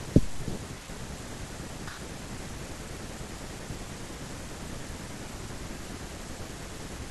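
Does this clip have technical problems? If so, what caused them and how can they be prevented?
No technical problems are audible.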